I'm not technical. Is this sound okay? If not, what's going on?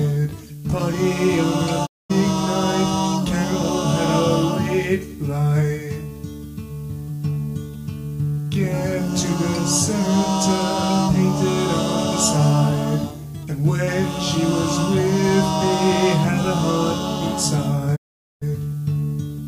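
No. There are two digital broadcast dropouts. The receiver briefly lost the signal and muted itself, so the sound quickly fades out around 1.85 to 2.12 s, then again around 17.95 to 18.44 s. Whatever played during those gaps is gone.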